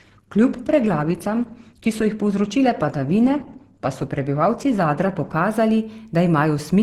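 From the start to 5.33 s, the speech has the sound of an adaptive stream starting at a low bitrate. Nothing reaches above about 12.2 kHz. The treble is thin or artificial, and codec artefacts are strong. This fits a low-rate Opus version, around 12 kbit/s. The player began cheaply to start fast. Once it had measured the connection, it switched up. At 5.33 s the quality jumps at once, with no gap, consistent with roughly 64 kbit/s.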